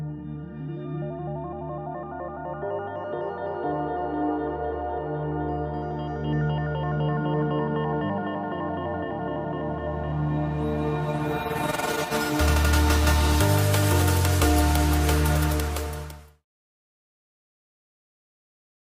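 There are no technical faults to describe; the fade-out that begins around 15 s and ends at 16.46 s is smooth and deliberate.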